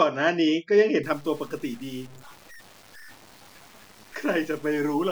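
From 1.03 s to the end, the speech was likely truncated to 7 bits without dither, leaving low bit depth without dither. The rounding error tracks the signal, about 25 dB below it, so quiet syllables turn gritty and the softest moments sputter or drop out.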